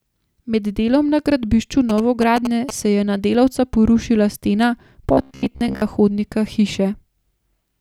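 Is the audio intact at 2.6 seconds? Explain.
No, GSM signalling bursts from a nearby 2G phone, rectified by the audio circuit, add a galloping dit-dit-dit of short 217 Hz buzzes, from 1.89 to 2.71 s, nearly as loud as the speech, shown as comb-like vertical stripes on the spectrogram.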